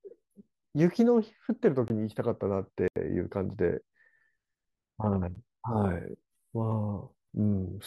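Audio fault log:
1.88–1.90 s, 2.88–2.96 s, 5.35 s: block of digital silence. The sound drops out for 20, 80 and 8 ms with no fade. The shortest is a tick, the longest a brief hole.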